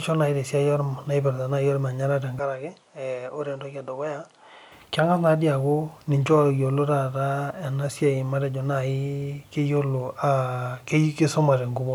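A speech recording in which the input likely switched to a poorer device from 2.39 to 4.72 s, with no gap at either change. Across that stretch the audio loses everything above 10.5 kHz and turns duller, drops a few decibels in level, and picks up a faint new noise floor far below the signal.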